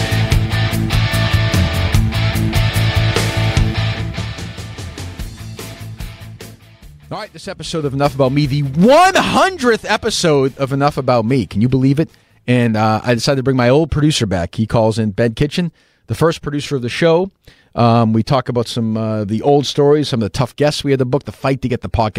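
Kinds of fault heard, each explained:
No technical faults can be heard; the signal stays intact throughout, with no dropouts, distortion or other audible defects.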